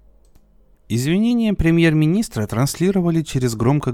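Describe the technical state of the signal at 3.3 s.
At 3.3 s the speech signal is intact, with no audible fault at that point.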